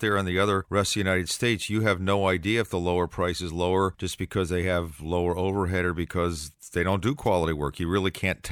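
At 7.24 to 7.28 s, just after "because they don't do", a wireless microphone noise hit occurs. The radio signal from the transmitter briefly faded as reflected paths cancelled. Receiver noise surged over the speech. It is heard as a quick swish of static lasting about 40 ms.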